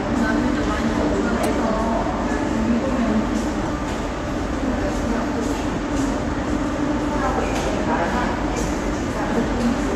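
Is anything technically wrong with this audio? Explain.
Yes. Four short chirp-like bursts cut through the audio, at 1.43–1.47 s, 3.63–3.70 s, 5.73–5.78 s and 8.62–8.66 s. Each is a sharp squeak of noise lasting about 40 to 60 ms, peaking around -10 dBFS, with the first burst the strongest at about -5 dBFS. This is a corrupt frame decoded: damaged bits in a few compressed frames were played anyway, so misread gains and codes placed energy at the wrong frequencies for roughly the length of those frames.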